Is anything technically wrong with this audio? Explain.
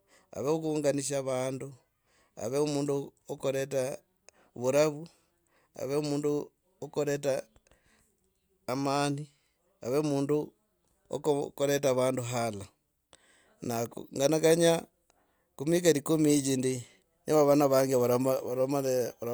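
No technical faults are audible.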